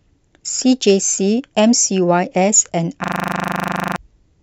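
Speech, interrupted by a system hang loop from 3.04 to 3.96 s: the driver or machine stalled while the audio hardware kept replaying its ring buffer, so one 40 ms slice of sound repeats identically at 25 Hz, a rasping stutter-buzz. Unlike packet-loss concealment, the repeats never fade, vary or soften; unlike a plain dropout, sound keeps playing rather than going silent. Roughly a second of the real audio is lost.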